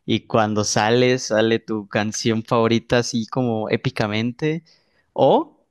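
No technical faults can be heard anywhere in this speech recording. Nothing in the signal path draws attention to itself at any moment.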